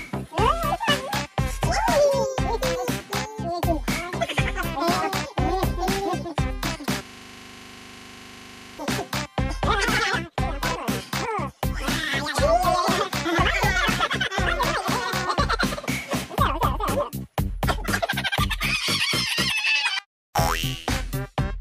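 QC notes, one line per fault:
7.05–8.79 s, system hang loop: the sound locks into a 25 Hz buzz for about 1.7 s as one 40 ms slice repeats exactly, some forty times. The system froze while the audio hardware kept replaying the same short ring buffer.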